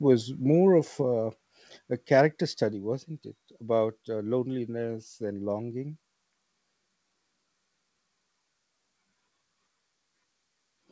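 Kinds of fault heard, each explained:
Microphone volume stepped down: at 1.02 s and 2.73 s, before "wasn't it", speech and background drop abruptly by about 4 dB, likely automatic input-gain reduction.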